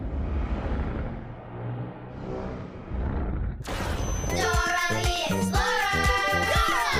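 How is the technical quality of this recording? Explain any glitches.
The recording has one clear fault: a feedback whistle that runs from 3.92 s to the end. A single thin tone at 6.1 kHz sits about 20 dB below the main sound and swells and fades slowly in level. The likely cause is a loudspeaker-to-microphone loop held just at the edge of feedback, so one frequency keeps ringing without building up. On a spectrogram it appears as a sharp horizontal line at 6.1 kHz from 3.92 s onward. The waveform shows little change, since the tone is well below the main signal.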